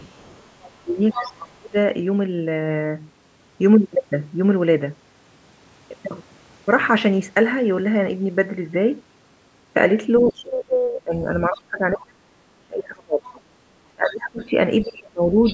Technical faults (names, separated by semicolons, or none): other side's voice leaking through; speech suppressed in double talk